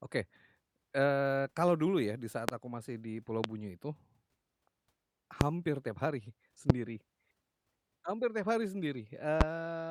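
A sharp, single loud pop cuts through the speech at 2.49–2.52 s, between "dulu ya di saat" and "aku masih di", then again at 3.44–3.47, 5.41–5.44, 6.70–6.73 and 9.41–9.44 s, each peaking roughly 25 dB above the speech. Likely cause: brief voltage spikes added to the signal.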